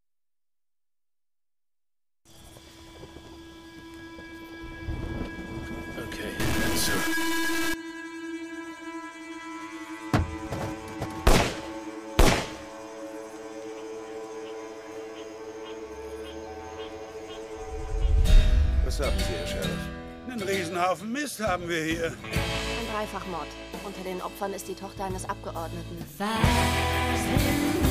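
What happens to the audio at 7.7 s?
At 7.7 s a stuck bit is just ending; it runs from 6.40 s to 7.74 s. The sound turns harsh and buzzy, with a gritty noise layer that persists even through the quietest moments. The likely cause is one data bit held fixed at 0 or 1, so about half the samples are pushed off by that bit's weight, a step of roughly -25 dBFS, loud enough to fill low-level passages with noise.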